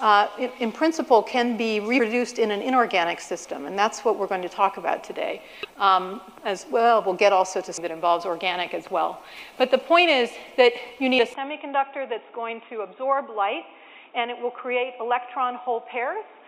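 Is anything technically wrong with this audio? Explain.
Yes, there are two kinds of fault.

Damaged data in a compressed stream occurs at 1.98 s, from 5.63 to 5.65 s, at 7.76 s and at 11.18 s. At each point corrupted bytes make the decoder misread a frame, lose sync and hunt for the next valid header. Each is heard as a brief chirp or blip. On a spectrogram each shows as a thin vertical smear of broadband energy. The waveform shows an abrupt discontinuity at that instant.

From 11.34 s to the end, the sound suddenly turns duller and boxier, with no gap at the change. This is most likely an input switched to a poorer device. Nothing above 3.8 kHz survives, the level drops by roughly 5 dB, and a new noise floor appears about 30 dB below the signal. A spectrogram shows a sharp ceiling at 3.8 kHz and a faint haze beneath the signal. The waveform envelope steps down slightly at the change.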